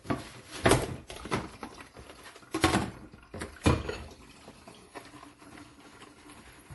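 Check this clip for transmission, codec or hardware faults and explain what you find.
One codec-related fault runs through the whole clip: transcoding between lossy codecs. From start to finish there is nothing above 11.5 kHz, and two different kinds of artefact sit together in the sound. The likely cause is a low-rate MP3 encode, consistent with about 48 kbit/s, that was later re-encoded to WMA at a higher rate, around 96 kbit/s. The second encoder spent its bits on the first one's artefacts and added its own, and the earlier, lower band limit survived. What separates this from a single low-bitrate encode is the mismatch: a fairly generous second-stage rate that still carries the artefacts of a much poorer first pass.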